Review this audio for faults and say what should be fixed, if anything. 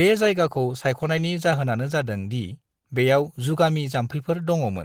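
Nothing in this recording needs fixing. No faults can be heard anywhere in the speech.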